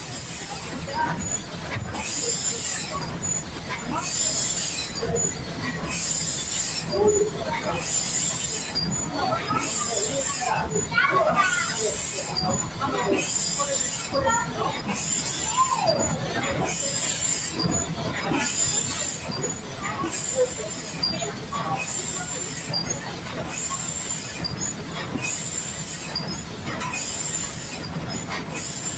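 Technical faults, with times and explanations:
Throughout, noise suppressor applied to music or sounds: a suppressor tuned for speech stays active and treats steady, sustained content as background noise. Its gain moves over a range of roughly 10 dB, so the level pumps and thins as held material sinks while attacks pass. Unlike a compressor, it doesn't react to loudness. It reacts to how steady the sound is, so quiet transients survive while loud sustained parts get pulled down.
0.00–1.96 s, 3.03–3.88 s, 5.34–5.61 s, 19.21–19.81 s, 20.74–21.52 s, and 22.50 s to the end, sound cut by the noise suppressor: in each of these stretches the suppressor judges the sound to be noise and lowers it further than the surrounding audio. The drop is about 4 dB at 5.34 s, about 5 dB at 19.21 s and about 6 dB elsewhere. Sustained or decaying parts sag and their tails shorten, while sudden onsets mostly stay intact. 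This separates it from a dropout or a gap, because the sound dips rather than vanishing.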